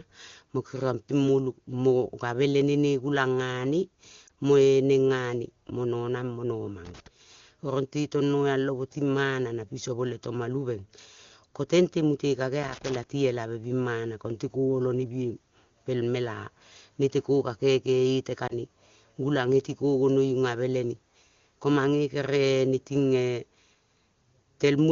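At 4.27 to 4.30 s there is a brief dip and warble. These are lost AMR speech frames. The length fits one lost 20 ms frame. The wideband decoder filled the gap by repeating the last good settings at lower gain. At 6.85 to 7.07 s an irregular burst of scratching cuts in. This is loose connector crackle: a worn contact making and breaking, chopping the signal. It returns at 12.63 to 12.95 s. At 18.47 to 18.57 s another concealed frame loss warbles briefly, and the sound recovers rough for a moment.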